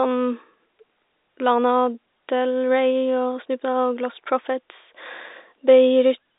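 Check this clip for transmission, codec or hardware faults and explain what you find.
No faults found; ordinary narrowband telephone-line coding throughout.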